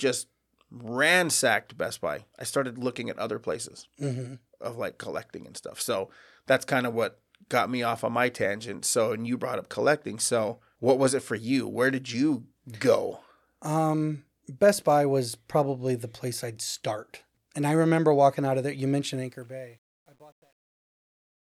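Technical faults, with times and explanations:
19.12–21.56 s, truncation distortion on the fade-out: coarse undithered steps, consistent with roughly 10-bit resolution, make the tail gritty from 19.6 s, not steadily hissy.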